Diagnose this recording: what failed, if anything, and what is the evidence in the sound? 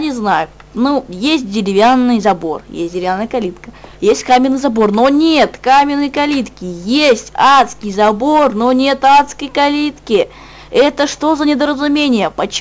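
Nothing in the signal chain shows a failure: no stage from wiring through conversion, buffering, processing, transport or playback leaves an audible mark anywhere in the recording.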